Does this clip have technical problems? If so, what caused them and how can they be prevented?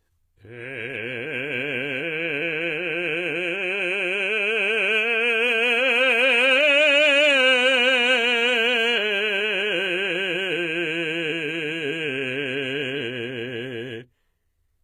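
Yes. Throughout, the music has gritty, metallic treble and nothing above 14.7 kHz. That likely comes from HE-AAC compression rebuilding the highs from copied lower bands, fitting a very low bitrate. Encode at a higher bitrate with plain AAC instead.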